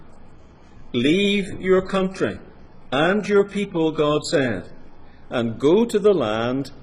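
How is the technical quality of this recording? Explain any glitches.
The technical quality is compromised at the start by an adaptive stream starting at a low bitrate. From 0.0 to 5.33 s the player is on a low-bitrate version, and the sound is dull and smeared, with a thin, synthetic-sounding top end. The character fits roughly a 12 kbit/s HE-AAC stream, where high frequencies are rebuilt rather than coded. Once the player had gauged the connection, it switched at 5.33 s to a better version, likely around 96 kbit/s AAC-LC, and the audio brightens abruptly with no gap. On a spectrogram the first section shows a hard ceiling with nothing above about 11.2 kHz, plus patchy, blocky upper bands. That ceiling lifts in a vertical step at the switch point. The waveform shows no break.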